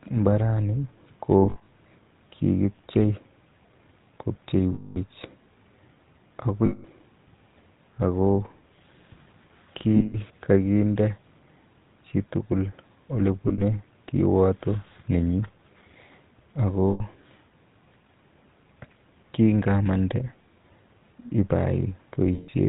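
A speech recording carries GSM full-rate codec damage throughout. The voice has a buzzy, gravelly roughness and nothing above 4 kHz, consistent with the 13 kbps GSM full-rate coder, which rebuilds the vocal tract from a sparse, regularly spaced pulse excitation. Lost GSM frames occur at 1.42–1.67 s, 4.74–4.98 s, 6.66–6.85 s, 9.96–10.16 s, 13.42–13.63 s, 16.90–17.01 s and 22.34–22.49 s. At each, the sound freezes into a rough metallic ring as the decoder repeats the last good frame's settings. The gaps at 1.42 s and 13.42 s are scattered dropouts with runs of about 70 ms at most. The others are single runs of 100 to 220 ms.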